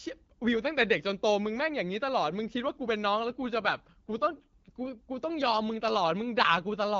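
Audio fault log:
3.18 to 4.96 s, AMR rate drop: the speech turns rougher and more synthetic for about 1.8 s, with no gap and no change in bandwidth. It sounds like the wideband codec stepping down to a lower mode, which fits a switch from 12.65 to 8.85 kbit/s with fewer bits left for the vocal-tract and pulse detail. On a spectrogram the 7 kHz ceiling stays put while harmonics smear and formants blur. The waveform shows no break.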